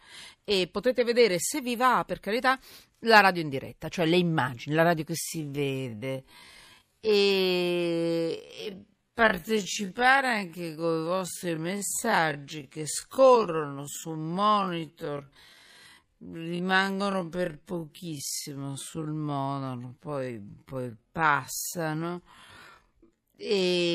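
A speech recording whose pace abruptly halves from 5.21 s, just after "immagini la radio che", through to the end, including "i vostri messaggi sempre". The pitch holds steady but the speech drags. This time-stretched section was likely slowed to about 0.5x speed by software that repeated short pieces to preserve pitch.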